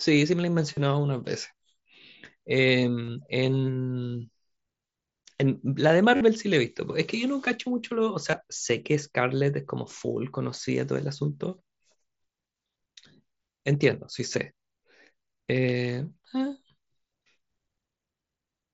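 At 0.74, 3.04, 6.16 and 8.31 s, concealed Bluetooth headset packet loss fills 30, 37.5, 45 and 22.5 ms runs with a buzzy repeated-cycle tone at full level, not a silent gap, warbling as real sound resumes.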